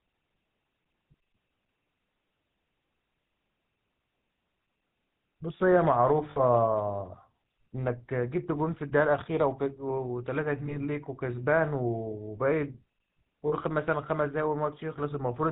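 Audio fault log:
throughout: GSM full-rate codec. The speech has the buzzy, gravelly roughness of the original GSM codec, which fits its 13 kbps full-rate mode. The codec rebuilds speech from a vocal-tract model driven by a sparse, regular pulse train, so the damage is plainly audible. On a spectrogram, energy stops at a hard ceiling near 4 kHz, and the harmonics look smeared and grainy. The waveform looks coarse rather than smooth.
6.30–6.39, 10.66–10.76, 13.48–13.53: lost GSM frames. In each of these three spots the sound briefly freezes into a rough, metallic ring instead of carrying on. The missing stretches are about 60 ms, 20 ms and 40 ms long. The decoder filled each gap by repeating the last good frame's settings. On a spectrogram each gap shows as a short block of flat, repeated bands. The waveform there shows a repeat.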